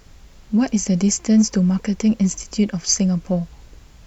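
Nothing stood out on listening to this speech recording.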